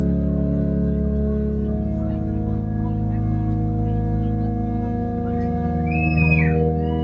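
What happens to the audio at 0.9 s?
Nothing goes wrong at 0.9 s: the audio is intact there, carrying only the normal shaping of a call's microphone processing, which trims the lowest bass and leaves nothing above 8 kHz.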